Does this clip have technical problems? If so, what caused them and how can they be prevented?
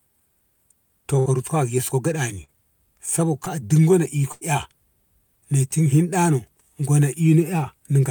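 Yes, there are two kinds of packet-loss damage here.

The burst of packet loss hits at 1.19 to 1.27 s and 4.32 to 4.43 s. The receiver stretched the last bit of speech for about 60 ms and then 90 ms, fading it into a held buzz or hiss, and then jumped ahead, skipping roughly 60 ms and 100 ms of real audio. A deeper jitter buffer plus forward error correction on a steadier network link would help most.

Short concealed packet loss shows up at 2.43 to 2.52 s and 3.45 to 3.48 s as brief smears. The decoder patched 45 ms and then just 10 ms by extending the previous sound, losing 40 ms and 20 ms of real audio, and trimmed about 9 ms at the first spot while blending back in. Enabling codec in-band FEC and reducing network jitter would cut these down.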